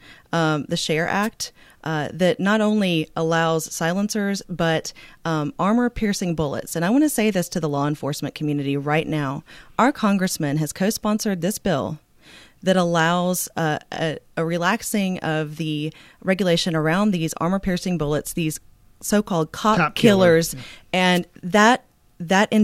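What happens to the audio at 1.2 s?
A brief burst of hiss and static cuts across the speech from 1.22 to 1.27 s, a wireless microphone noise hit. The analogue FM radio link momentarily fades as reflected signals cancel, letting the receiver's own noise rise up for about 55 ms.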